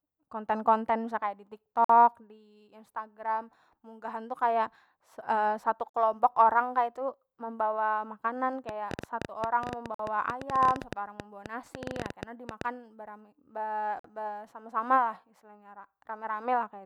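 At 1.84 s and again at 5.89 s the sound drops out for 50 ms. This is a gap between chunks: silence inserted at each 4-second join, so nothing is lost. Its strict regularity separates it from random dropouts.

From 8.69 s to 12.62 s, right after "membawa makanan", a train of clicks runs over the sound at about 9.8 per second. There are around forty similar pops at uneven spacing, some roughly 10 dB above the sound, likely from electrical interference. Unlike the gaps, these are added pulses and are audible in pauses as well.

The third chunk gap, at 9.94 s, falls inside that stretch, and the fourth comes at 13.99 s, still 4.05 s apart.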